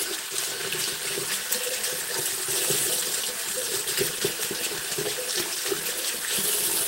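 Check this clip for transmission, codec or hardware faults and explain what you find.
No transmission, codec or hardware faults can be heard anywhere in the recording. There is nothing to report.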